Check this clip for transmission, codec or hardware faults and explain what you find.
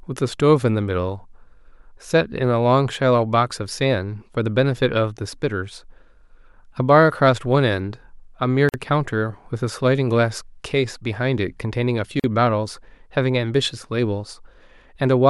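Two gaps at a join of encoded pieces, at 8.69 to 8.74 s (49 ms) and 12.20 to 12.24 s (42 ms). Separately encoded sections were joined untrimmed, leaving encoder start delay and end padding as short silences that cut the speech before it resumes where it stopped.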